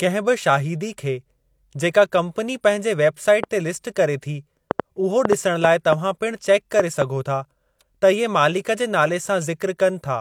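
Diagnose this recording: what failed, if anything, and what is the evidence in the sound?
A train of clicks runs from 3.43 to 7.03 s: about ten similar pops at an uneven 2.2 per second, roughly 20 dB above the speech, likely interference coupling into the analogue wiring.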